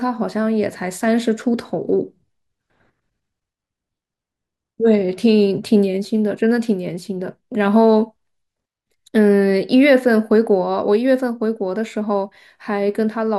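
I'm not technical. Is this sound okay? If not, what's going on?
Yes, this speech recording is in good technical shape, with nothing going wrong in the signal anywhere in the clip.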